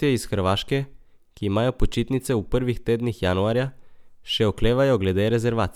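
No technical faults can be heard anywhere in this speech recording. There is nothing to place on a timeline.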